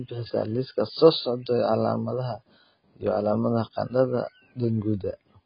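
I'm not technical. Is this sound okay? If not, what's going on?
No. Heavy AAC compression runs through the whole clip, from start to finish. The speech sounds dull and muffled, with nothing above about 5.1 kHz, and hissy sounds like s turn watery and fizzy. The likely cause is a very low-quality setting, where the encoder discards the high frequencies and fine detail to make the file smaller.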